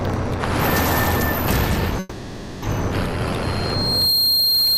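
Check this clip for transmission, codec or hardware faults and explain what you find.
Two faults turn up, one from the network and one from the room's hardware.

From 1.99 to 2.64 s there's a call audio freeze: the last sound hangs on as a fading buzz or hiss for about 630 ms, likely because delayed packets drained the jitter buffer. It then resumes where it stopped, so nothing is lost.

From 3.42 s to the end there's a loudspeaker feedback squeal: a 4.2 kHz tone swells over roughly 0.7 s to about 5 dB above the signal, as the mic picks up its own speaker.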